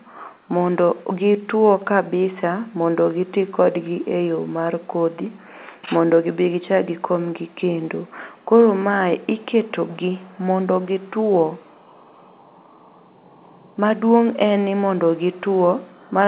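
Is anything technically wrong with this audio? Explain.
No, nothing in this speech recording is technically wrong. The room noise sits about 52 dB below the voice, and the top of the sound stops at 4 kHz, which fits a narrowband call codec such as G.711 running normally.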